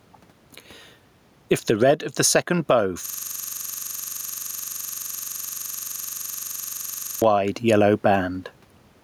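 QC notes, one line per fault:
throughout: gain pumping. The room noise sits far below the speech, and the gain swings by around 10 dB. This is likely from gain set too high and a fast limiter clamping down, squashing the dynamics.
3.06–7.22 s: system hang loop. Right after "of the second bow", a 42.67 ms slice of audio repeats exactly, close to a hundred times, producing a coarse buzz-stutter at 23.4 Hz. The loop length fits a 2048-sample ring buffer replaying while the system was frozen.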